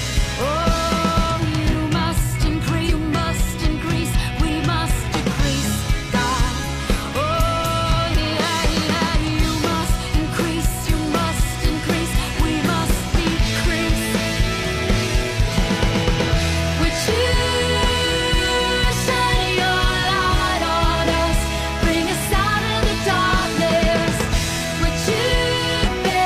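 At 2.84 to 2.90 s, 15.47 to 15.52 s and 25.82 to 25.89 s, a brief glitch of roughly 60 ms breaks into the sound. This is damaged data in a compressed stream: corrupted bytes make the decoder misread those frames and lose sync until it locks onto a valid frame header again. Unlike a plain dropout or a single-sample click, each burst comes from the decoder losing its place in the compressed stream.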